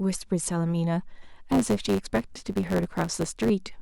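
From 1.40 s to 3.5 s, a block size mismatch truncates each block's end. A 100 Hz buzz appears. Speech runs 1.09 times faster, timbre unchanged.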